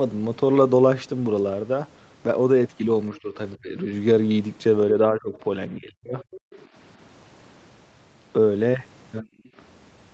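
Between 3.22 and 3.36 s, and again from 3.56 to 3.91 s, 5.02 to 5.34 s and 5.70 to 6.22 s, the speech dips sharply. This is speech suppressed in double talk, likely because the echo canceller confused the talker with loudspeaker echo while both sides spoke. The drops run from about 10 dB to about 40 dB, deepest around 5.7 to 6.2 s. On a waveform they appear as sudden pinches in the envelope, and on a spectrogram as brief vertical gaps.

From 6.21 to 6.66 s the other side's voice leaks through, a faint second voice about 25 dB under the speech, likely left behind by incomplete echo cancellation. On a spectrogram it shows as weak, separate harmonic traces beneath the main ones.

Within that stretch, at 6.47 to 6.51 s, the background is gated by the echo canceller. The room sound drops about 40 dB for roughly 40 ms, visible as a thin, nearly empty notch across the noise floor.

From 9.21 to 9.55 s the speech is suppressed in double talk again, down by about 30 dB.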